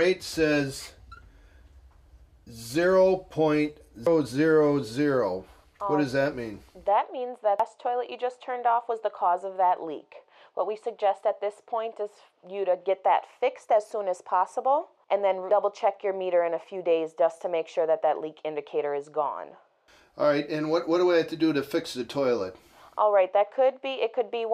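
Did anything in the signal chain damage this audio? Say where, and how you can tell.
Yes, damaged data in a compressed stream, heard at 4.07 s and again at 7.60 s as brief disruptions. The fault sits in the codec or storage stage: corrupted bytes in the encoded stream made the decoder misread frames, lose sync and skip ahead to the next valid frame header.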